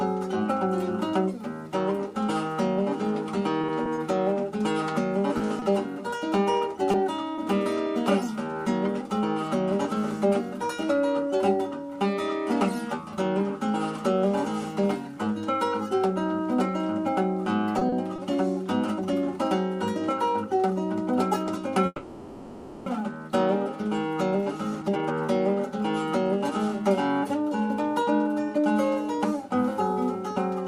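From about 3.61 to 7.40 s there's a run of scattered short gaps, around seven of them, none longer than about 20 ms. Packets went missing or turned up late here and there, and each time the receiver papered over the hole by carrying the last bit of sound forward. It stays clear, but you catch little ticks and smeared hiccups, with roughly a tenth of a second of real audio lost along the way.

Then at 17.79 to 18.20 s there's a quick repeated stall, a stutter. Three times in under half a second the jitter buffer ran dry because packets were arriving too slowly, and the receiver stretched the last sound to cover, 70 ms in all with the longest wait 30 ms. Nothing actually goes missing, but that moment drags and catches on itself.

At 21.86 s the audio freezes for about a second, until 22.88 s. What you hear is the last sound held and smeared out, fading toward a brief silence of about 10 ms before things pick up exactly where they stopped. 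That points to a call audio freeze, likely from packets held up in transit and the jitter buffer emptying. Nothing is lost, but a one-second gap gets pushed in, so everything after runs a second later.

Right after that, from 24.06 s to 30.35 s, you get a jitter buffer speed-up. Having banked that extra second of delay, the receiver claws some of it back by snipping out tiny pitch-period-sized slices over and over, about half a second in total. The pitch doesn't move, but the playback runs at about 108% speed, so that closing stretch sounds noticeably hurried.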